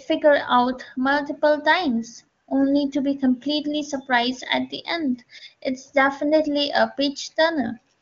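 At 2.41 s, for about 60 ms to 2.47 s, AMR comfort noise replaces the real background: the phone judged the pause silent, stopped sending speech frames, and the receiver synthesised a smooth, steady hiss. It recurs at 7.97 s for the final 45 ms, through the clip's end.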